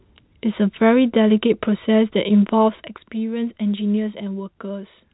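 No technical faults are audible.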